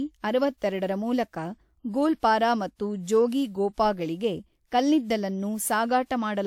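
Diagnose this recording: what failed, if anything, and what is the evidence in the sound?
Generation loss throughout the speech, at the codec stage: the sound is swirly, smeared and hollow beyond what a single encode at this quality would produce, with blurred attacks and nothing above 19.8 kHz. The likely cause is repeated lossy re-encoding, roughly three passes, which fits WMA near 128 kbit/s, each pass requantising on a shifted frame grid so the noise accumulates.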